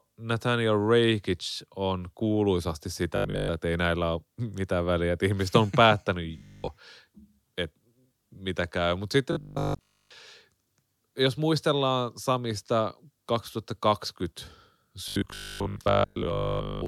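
Audio likely arriving too seldom makes the playback loop a 20 ms stretch, producing robotic sound from repeated short buffers: a rigid 50 Hz metallic buzz at 3.17–3.49 s (after "on kuuluisasti"), 6.38–6.68 s (after "että ihmiset on päättänyt"), 9.33–10.11 s and 15.08–16.86 s.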